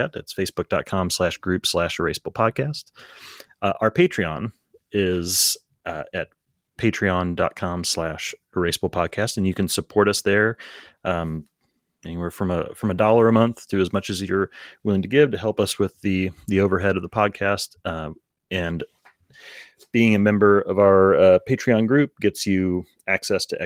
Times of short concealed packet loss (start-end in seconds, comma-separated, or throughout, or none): none